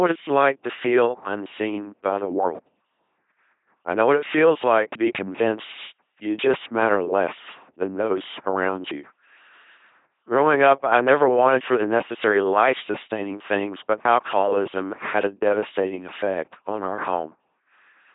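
From start to finish the speech runs through what sounds like an LPC-10 vocoder, heavily degraded, with nothing above 3.8 kHz. Each instant is rebuilt as either buzz or hiss through a short vocal-tract filter, giving that mechanical robot tone a 2.4 kbit/s coder produces.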